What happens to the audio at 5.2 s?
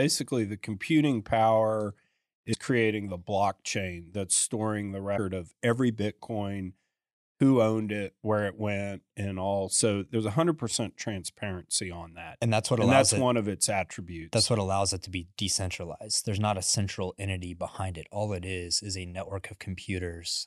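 A short glitch cuts into the speech from 5.14 to 5.19 s, lasting only about 50 ms and sounding like a chirp, squawk, click or short hole rather than part of the sound around it. This is damaged data in a compressed stream. Data in that stretch of the encoded file is corrupt, so the decoder misreads or discards the affected frames, loses its place, and scans ahead for the next valid frame header before decoding cleanly again.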